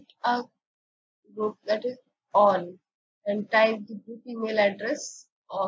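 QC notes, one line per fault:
No faults found; call microphone processing is working normally.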